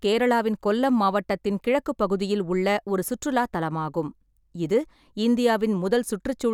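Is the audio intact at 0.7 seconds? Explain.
Yes, the speech at 0.7 seconds is intact, with no dropout, click, distortion or other fault at that moment.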